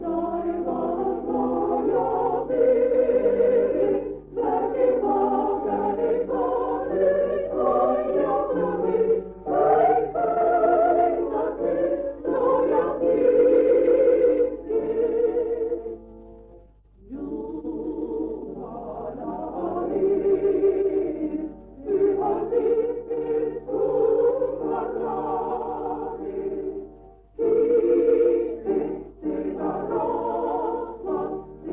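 No technical faults can be heard anywhere in the audio.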